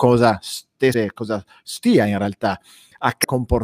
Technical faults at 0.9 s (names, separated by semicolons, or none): damaged data in a compressed stream